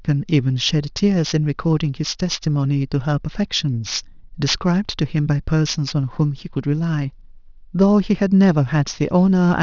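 A speech clip with aliasing running through its whole length. The sample rate appears to have been halved, which fits a drop from 24 kHz to 12 kHz, without a low-pass filter first, so energy above 6 kHz has folded back down into the band below it. Sibilants come out gritty and metallic, with the folded components sitting roughly 15 dB under the speech. On a spectrogram the energy runs hard up to 6 kHz and stops, with mirrored fricative traces descending where they should rise.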